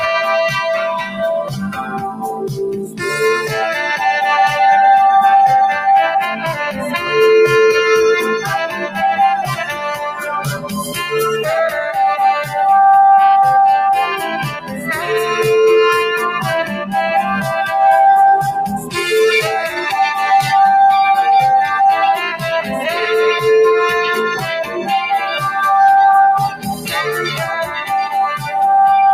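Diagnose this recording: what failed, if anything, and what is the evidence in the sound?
A noise suppressor applied to music or sounds is active throughout, at the call-processing stage. A speech-tuned suppressor treats steady, sustained content as noise, so the level swings by around 10 dB as held sound and tails are pulled down while onsets pass.

Sound cut by the noise suppressor appears at 1.02–3.03, 6.35–6.86, 8.68–10.98, 14.49–14.88, 16.64–16.94, 18.74–18.96, 24.4–24.84 and 26.49–28.51 s, with the deepest drop about 13 dB in the first stretch. Each time, the suppressor's gain drops on sustained or decaying sound, so that passage sinks or its decay is cut short.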